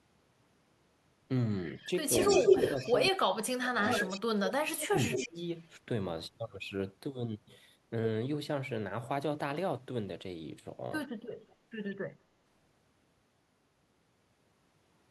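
A speech recording with echo leak: a delayed copy of the talker returns at 1.74–1.86, 2.21–2.93, 3.83–4.17, 4.8–5.27, 5.58–5.69 and 11.32–11.56 s, lagging by 167 to 191 ms. It is faint at the edges, near speech level mid-clip, and briefly louder than the speech itself around 2.2–2.9 s, likely from an echo canceller letting loudspeaker pickup through. From 2.93 to 5.38 s the speech is suppressed in double talk, cutting in and out for about two seconds in total with drops as deep as around 35 dB while the echo overlaps, consistent with the canceller ducking both signals when it cannot separate them.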